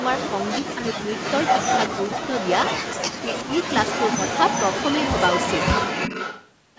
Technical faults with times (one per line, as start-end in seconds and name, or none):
0.00-0.75 echo leak
0.61-1.11 speech suppressed in double talk
1.13-2.96 echo leak
3.03-3.57 speech suppressed in double talk
3.36-6.51 echo leak